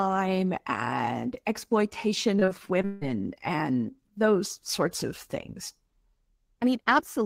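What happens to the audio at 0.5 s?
Nothing goes wrong at 0.5 s; the audio is intact there.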